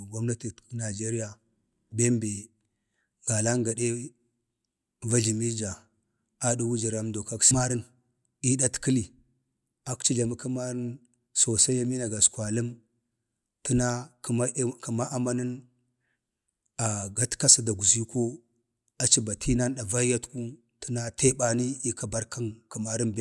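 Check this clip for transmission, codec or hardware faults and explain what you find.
Nothing in the recording points to a transmission, codec or hardware problem, as the speech signal stays continuous and steady throughout.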